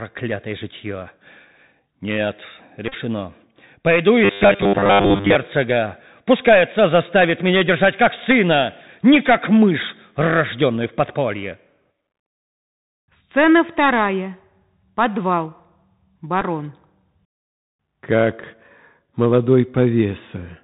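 Bluetooth CVSD headset codec, throughout the speech: the signal is coded at 64 kbps as a single up-or-down bit per sample, with a step size that keeps adjusting. Nothing above 4 kHz survives, so the sound is boxed into a narrow telephone band. A granular hiss sits under everything, s sounds come out scratchy, and bright, loud moments overload because the step cannot climb fast enough to follow them.

Bluetooth headset packet repeated, from 2.88 to 2.94 s: packets between headset and phone went missing, and the chip decoded the previous packet's bits again in their place. About 45 ms of audio is replaced across roughly 52 ms, with the longest unbroken stretch around 30 ms. That run of repeats produces a brief steady buzz near 267 Hz, the 3.75 ms packet rhythm, before clean audio resumes.

Robotic sound from repeated short buffers, from 4.25 to 5.35 s: the speech turns into a rigid, metallic buzz pinned at 100 Hz that still roughly tracks the speech underneath. 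That pitch fits a 10 ms chunk being played over and over. This likely comes from new audio arriving too late, with playback filling the gaps by repeating the last short buffer while most of the real audio in this stretch is skipped.

Bluetooth headset packet repeated again at 16.41 to 16.44 s: a much shorter loss of 7.5 ms, which points to a couple of packets. Their bits are decoded a second time.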